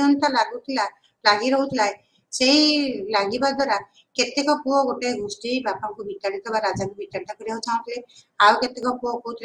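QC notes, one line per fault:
8.67–8.83 s, one channel drops out: for about 0.16 s the level falls abruptly by about 6 dB and recovers just as sharply. The cause is likely one stereo channel going silent before the mono sum. Unlike a full dropout, sound continues at half amplitude rather than vanishing.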